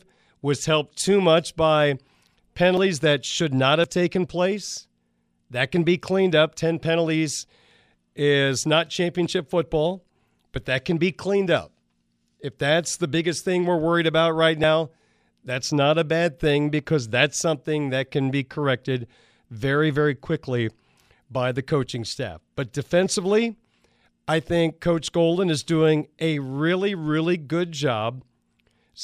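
At 2.77 s, 3.84 s and 14.64 s the speech jumps abruptly. There is no gap of silence. The sound simply skips forward, losing roughly 40 ms each time. This is most likely a dropped buffer (overrun). The recording software failed to collect a block of samples in time. The hardware overwrote them, and the surrounding audio was spliced together directly.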